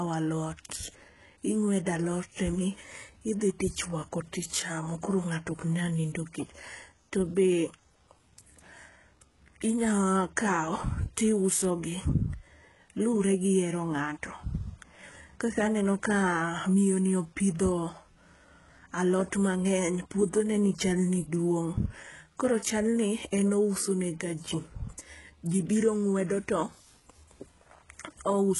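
Throughout the speech, the treble sounds bright yet synthetic, with nothing above 11.5 kHz, and s sounds come out gritty and metallic. The cause is likely heavy HE-AAC compression, consistent with roughly 12 kbps: upper bands are rebuilt from copied lower ones, unlike a plain low-pass's dull top.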